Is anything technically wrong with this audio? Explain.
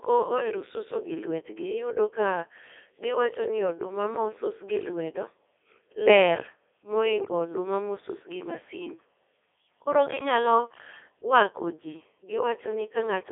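Yes. Throughout, the speech went through a Codec 2 vocoder at 3.2 kbit/s, which keeps only pitch, voicing, energy and spectral shape and rebuilds the sound from sine waves. The result is heavily robotic and buzzy, confined to roughly 150 Hz to 3.5 kHz.

From 7.20 to 7.32 s, bit errors on the digital voice radio hit the vocoder stream at a rate of a few percent. That stretch fits a handful of corrupted frames, and each flipped bit skews a frame's pitch, level or spectrum, so the voice briefly warbles and jumps into garbled bleeps.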